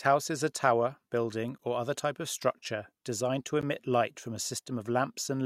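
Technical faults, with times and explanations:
1.58 s and 3.61 s, gap between stream segments: two hard-edged dropouts of about 12 and 14 ms, right after "is a tower building" and "of structure designed to". The segment timestamps leave tiny holes, which the player fills with silence. They're spaced about 2 s apart, matching the segment length, and no sound goes missing.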